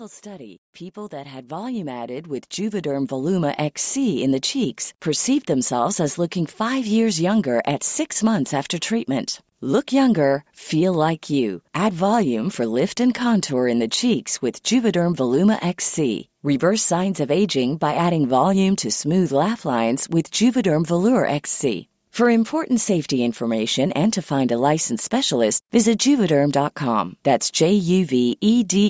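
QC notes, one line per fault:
0.23–4.84 s, automatic gain rising: the AGC, finding input too quiet, lifts gain about 16 dB, so voice and background swell together until "perceived themselves as looking".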